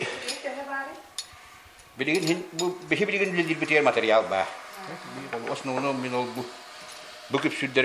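No technical faults can be heard anywhere in this audio.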